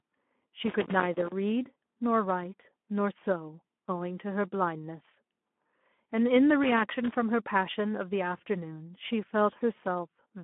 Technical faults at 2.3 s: Speex codec

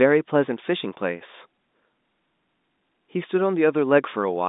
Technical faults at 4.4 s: none

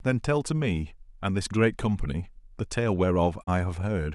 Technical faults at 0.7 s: none

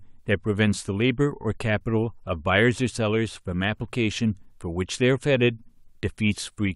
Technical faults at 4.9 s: none

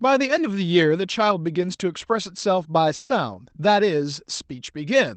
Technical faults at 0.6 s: none

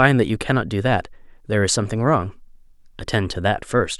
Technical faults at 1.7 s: none

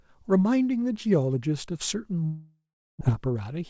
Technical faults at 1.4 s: none

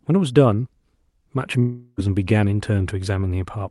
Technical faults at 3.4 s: none

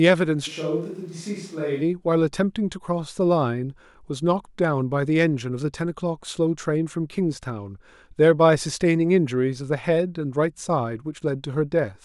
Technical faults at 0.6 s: switch to a distant microphone

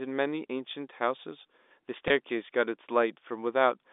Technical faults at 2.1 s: packet loss with pitch repetition

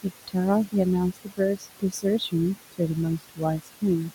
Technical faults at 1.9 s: noise suppressor artifacts; speech cut by the noise suppressor

